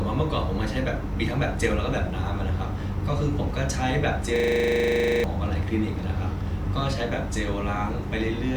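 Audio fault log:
4.36–5.24 s, system hang loop: a single 40 ms slice of speech repeats 22 times at 25 Hz, giving a rapid machine-gun stutter. The output hardware kept replaying its ring buffer while the system stalled, which fits a 40 ms buffer, and about a second of speech never arrives. Unlike an underrun, which leaves gaps or clicks, or a codec glitch, which smears sound, each repeat here is identical and evenly spaced.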